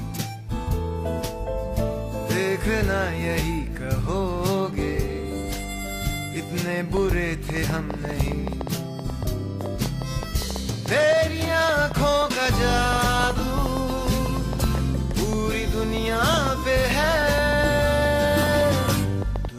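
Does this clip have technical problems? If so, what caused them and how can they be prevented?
Yes. A train of clicks runs from 6.97 s to 19.46 s: roughly seventy similar pulses at about 6 per second, unevenly spaced, peaking near 10 dB above the programme. The likely cause is interference from nearby equipment or a faulty connection or power supply. To prevent it, keep devices away from cables and use a stable, well-powered interface.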